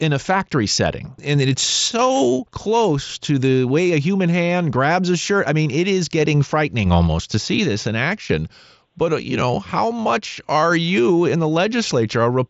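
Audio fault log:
Nothing stood out on listening to the speech.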